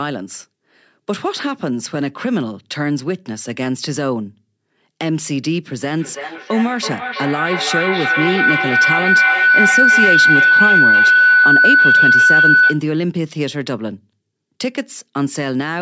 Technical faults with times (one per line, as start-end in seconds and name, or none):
5.96-12.87 feedback howl